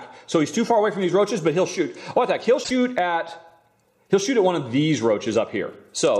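A brief garbled blip cuts into the audio from 2.60 to 2.71 s: damaged data in the compressed stream made the decoder misread frames and resynchronise.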